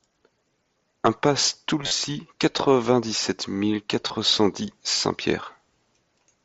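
At 1.82 to 1.91 s, concealed Bluetooth headset packet loss: roughly 60 ms of speech scattered across 90 ms never arrived, and the receiver filled each gap by repeating the best-matching stretch of recent waveform. The longest run, about 30 ms, gives a brief buzzy, level-held tone, which on a spectrogram appears as flat harmonic bands, with a small warble where real audio resumes. A shorter 22.5 ms gap follows at 4.08 s, just before "cent dix", in audio carried over the mSBC wideband link.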